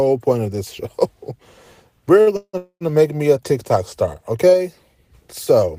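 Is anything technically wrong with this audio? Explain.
Yes. At 2.21 to 2.28 s there is a short stall from a late packet. The jitter buffer emptied when a packet came due, so the receiver stretched the last sound for about 51 ms before resuming in place. That sound is held too long, with a faint buzzy dip, and nothing is lost.

Two call audio freezes follow, at 2.36 to 2.55 s and 2.57 to 2.83 s. Each holds the last sound as a fading buzz, then drops to silence for about 50 ms and 80 ms, before continuing where it stopped. The added gaps are about 169 ms and 233 ms. The likely cause is packets held up in transit draining the jitter buffer.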